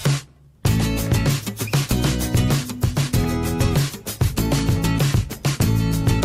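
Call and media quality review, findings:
Nothing stood out on listening; no findings to raise against this clip.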